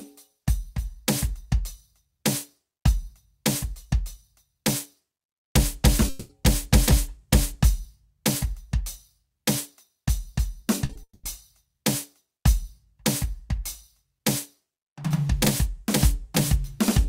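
At 6.09 s the music gives way to a smeared, buzzy continuation of the previous sound that lasts to 6.31 s. This is most likely a long network dropout: about 200 ms of audio never arrived, and the receiver stretched out what it last had, so the music resumes with that stretch missing. Here the filler covers the whole gap, so it does not fall silent.

Near 10.85 s there are two short concealed packet losses, 40 ms to 10.91 s and then 20 ms at 10.93 to 10.97 s. Each hole was patched by extending the preceding sound and blending it back in. They come across as a quick smear or wobble rather than a gap. What sets them apart from a dropout is that they are too brief for the patch to fade.

From 11.03 to 11.25 s comes a second long network dropout, again likely from 200 ms of lost audio. This one runs longer than the concealment can sustain. The continued sound decays, then about 110 ms of silence follows before the music returns without the lost portion.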